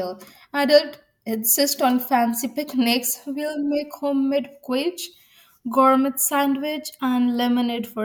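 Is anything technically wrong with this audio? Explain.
No, nothing is technically wrong with this audio.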